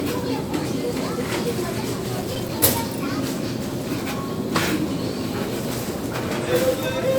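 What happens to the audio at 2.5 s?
At 2.5 s the everyday sound is inside a run of CD scratch ticks from 1.83 to 2.75 s: eight brief ticks, each a few milliseconds at most, where a disc blemish defeated error correction on each rotation. They show as thin vertical spectrogram lines and small waveform notches.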